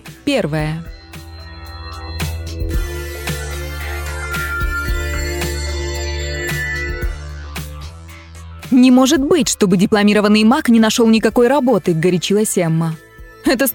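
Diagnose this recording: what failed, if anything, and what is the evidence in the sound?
Nothing stood out on listening that would point to a failure at any stage of the chain.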